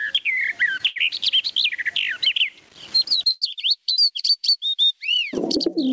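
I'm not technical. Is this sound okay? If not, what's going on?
No. There are three problems.

The first is gain pumping, and it runs through the whole clip. The level keeps swelling and sinking by a large amount. The likely cause is a microphone level set far too high, with an automatic limiter pulling it down on every loud sound. The result is squashed audio, with loud and soft parts pushed close together.

The second is a short stall from a late packet, from 0.87 to 0.98 s. The audio travelled over a call connection in small pieces. One piece arrived late. While the receiver waited, it held the last bit of sound for about a tenth of a second. That sound is drawn out, with a faint buzz or dip. Nothing is lost. The audio just resumes a moment late.

The third is a call audio freeze, from 3.31 to 3.44 s. For about a tenth of a second, the last sound carries on as a buzz or hiss that fades, without going fully silent. 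Then the audio picks up exactly where it stopped. The likely cause is pieces of audio held up on the connection, leaving the receiver with nothing new to play. Again nothing is missing, but a small pause has been added.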